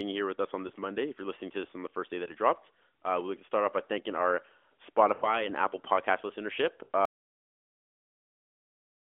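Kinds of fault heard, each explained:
Lost AMR speech frames: At 0.68 s after "here with us on", 2.24 to 2.33 s after "on the first day", 5.14 to 5.41 s and 6.84 to 6.89 s, corrupted frames were concealed by repeating the last good pitch and vocal tract settings at falling gain. Single losses warble briefly, and the four-frame run smears and fades.
Audio dropout to silence: From 7.05 s to the end the sound cuts off into silence, with no room tone at all. The input was likely lost, through a failed link or disconnected device, while the encoder kept writing silence.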